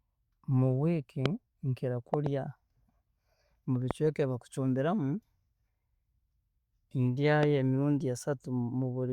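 Loud pops hit at 1.26–1.28 s, a double one right after "week nkira" at 2.14–2.29 s, then softer ones at 3.91–3.93 and 7.43–7.45 s, jumping about 15–20 dB above the speech, which carries on underneath. The likely cause is a voltage spike from a plug, switch or static.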